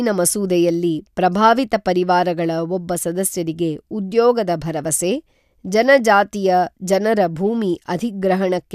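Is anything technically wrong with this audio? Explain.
No, nothing technically wrong can be heard anywhere in this speech recording.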